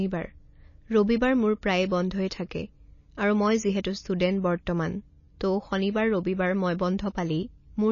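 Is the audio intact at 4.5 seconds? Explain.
No. At 4.5 seconds, as throughout the clip, the sound has nothing above 7.1 kHz and a plainly audible watery swirl, likely from MP3 compression at a low bitrate of around 28 kbps. The encoder drops the treble and lets weak frequency lines flicker between frames, so the swirl sets it apart from a simple low-pass filter.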